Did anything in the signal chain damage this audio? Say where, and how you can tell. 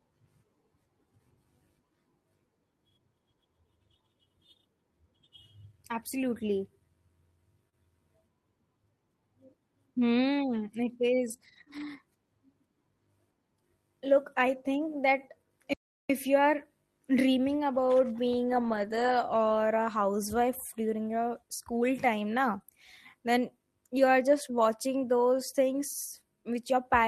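Yes. The damage is in the network stage of a call, plus one stall at playback.

Short concealed packet loss appears at 7.69–7.74 s, 11.36–11.40 s, 11.64–11.68 s and 22.62–22.65 s, just before "then you are just". Each hole is about 20 ms of missing audio that the decoder papered over by extending the preceding sound, for roughly 13 to 29 ms, before crossfading back. You hear a brief smear or wobble rather than silence, which distinguishes it from a dropout.

Lost packets rebuilt from error correction occur at 11.28–11.34 s, 11.40–11.62 s, 11.68–11.82 s, 18.48–19.10 s (right after "you are dreaming about") and 22.58 s. Here the following packets carried low-bitrate Opus copies, so nothing stops. The rebuilt stretches, up to 320 ms, sound rougher and noisier. There is no extrapolated smear, which separates them from concealment. The cluster around 11.3–11.8 s alternates with concealed gaps, so that burst of loss was only partly covered by the redundancy.

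A playback stall runs from 15.73 to 16.10 s, immediately before "you are dreaming about". The sound halts mid-flow in clean silence for about 360 ms, then resumes. The cause is likely the player running dry or its thread being blocked. Unlike packet loss, nothing fills the gap, and it is far longer than one 20 ms frame.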